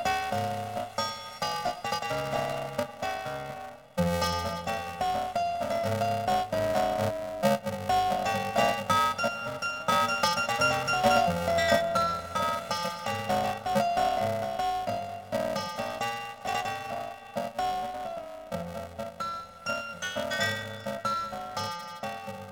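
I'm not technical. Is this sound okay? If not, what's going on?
No. Planar audio read as interleaved, throughout: tiny 2.9 ms chunks, stored left-then-right, get read as alternating pairs, causing a steady robotic buzz at 345 Hz.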